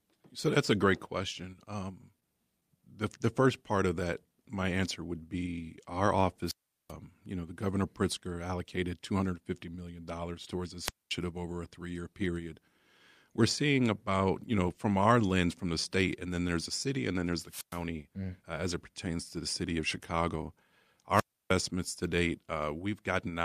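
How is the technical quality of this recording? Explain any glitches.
The speech carries five glitches: one brief network stall and four wireless-microphone squelch dropouts.

At about 2.20 s there is a short stall from a late packet. A packet arrived late, so the receiver held the last sound for about 17 ms and then carried on from the same point. Nothing is lost, which sets it apart from packet loss, but the sound briefly drags.

The wireless microphone squelch dropouts fall at 6.44–6.93 s, 10.82–11.13 s (between "million towards" and "over a three year"), 17.46–17.82 s (between "and then there's" and "mm uh as it"), and 21.12–21.54 s (just before "to date"). Each time, the FM radio signal faded until the receiver muted its output, leaving holes of roughly 390, 230, 110 and 310 ms. Each one is marked by hiss swelling into near-silence, unlike a clean digital cut.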